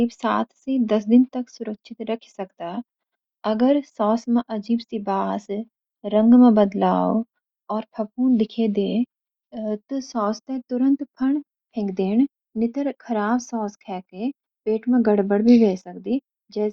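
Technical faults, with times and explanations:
No technical faults can be heard in this speech recording. There is nothing to list by time or to explain.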